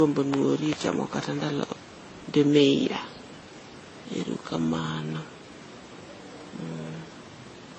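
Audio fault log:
throughout, transcoding between lossy codecs: the speech stops dead at 8.3 kHz, with dissimilar smearing and warbling artefacts layered together. This points to a likely chain of low-bitrate encodes, such as HE-AAC, MP3, then Vorbis, each compounding earlier damage and keeping the lowest cut-off.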